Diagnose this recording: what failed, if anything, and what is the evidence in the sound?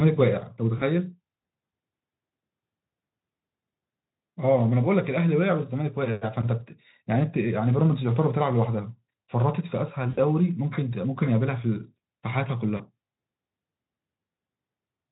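Network packet loss, concealed by the Speex speech codec: the decoder stretched the last speech into a buzzy, fading tone at 0.77–0.84 s and 12.77–12.83 s, which fits single lost 20 ms frames, and at 10.09–10.20 s, about 80 ms lost, with speech staying weak briefly afterwards.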